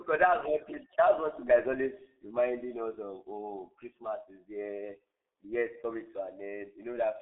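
Speech squeezed through the G.723.1 codec the whole way: nothing above 3.8 kHz, a narrow 250 Hz to 3.7 kHz band, and heavy hoarse, smeared consonants, which fits a roughly 6 kbit/s rate.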